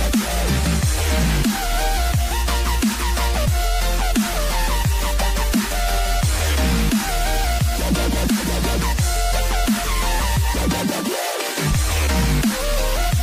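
At 1.09 s and again at 3.46 s the sound jumps forward: compressed frames skipped. Whole frames never reach the output, so about three frames (roughly 70 ms) vanish at the first point and about two (roughly 50 ms) at the second. The 23.2 ms step fits a 1024-sample frame. Unlike a dropout, nothing goes silent; the audio simply jumps ahead.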